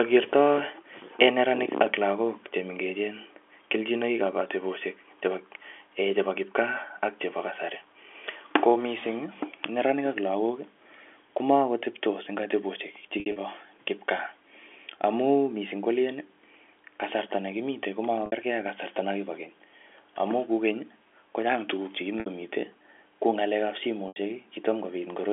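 Packet loss with pitch repetition hits the speech at 13.2–13.36 s (100 ms lost, scattered), 18.26–18.32 s, 22.2–22.26 s and 24.08–24.16 s. Each gap sounds like a brief, buzzy held tone as the last pitch period repeats, rather than a clean silent dropout.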